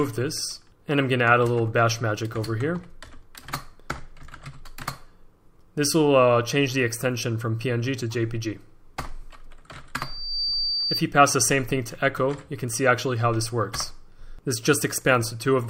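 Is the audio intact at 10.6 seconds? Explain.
No. At 10.6 s a loudspeaker feedback squeal is sounding, lasting from 9.98 to 11.04 s. The microphone re-amplifies its own loudspeaker output until a 4.6 kHz tone runs away, swelling within roughly 0.4 s to about the level of the surrounding sound. On a spectrogram it shows as one bright horizontal line at 4.6 kHz; the waveform envelope swells steadily.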